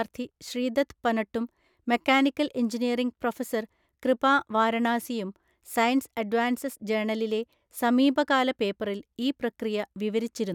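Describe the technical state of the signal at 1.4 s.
At 1.4 s the speech signal is intact, with no audible technical fault at that moment.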